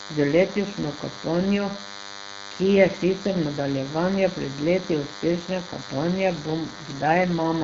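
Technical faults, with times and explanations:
Throughout, DECT cordless phone buzz: A DECT handset or base station close to the line is sending a short radio burst every 10 ms, and a stage in the audio circuit is rectifying those bursts into the signal. The result is a steady, thin buzz at 100 Hz, rich in harmonics, sitting only about 10 dB below the speech. Because it is tied to the radio's fixed frame timing, it stays level and constant under and between the speech.
6.3 s to the end, AMR rate drop: The radio link weakens here, and the network tells the codec to spend fewer bits on the speech and more on protecting them from errors. The roughness fits a step down from the wideband codec's clean 12.65 kbit/s to 8.85 kbit/s. The bandwidth stays the same and nothing drops out, but from 6.3 s the speech turns rougher and more synthetic, and it stays that way to the end of the clip.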